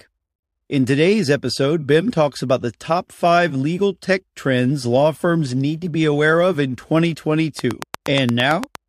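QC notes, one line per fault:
7.59–8.76 s, train of clicks: likely interference or a faulty connection injecting regular pulses, about 8.6 per second, roughly ten sharp ticks well above the speech.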